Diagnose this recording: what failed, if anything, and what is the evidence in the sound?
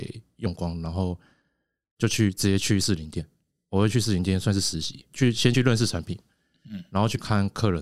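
Listening through the speech, nothing stood out that would point to a failure at any stage of the chain.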